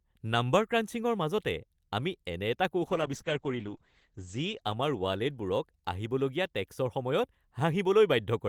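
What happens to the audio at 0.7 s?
Nothing goes wrong at 0.7 s; the speech carries on intact through that moment with no audible fault.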